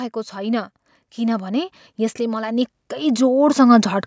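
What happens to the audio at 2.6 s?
At 2.6 s the automatic gain rising from 0.33 to 4.02 s is underway: the control lifts level about 13 dB, swelling voice and background together, a waveform envelope widening steadily.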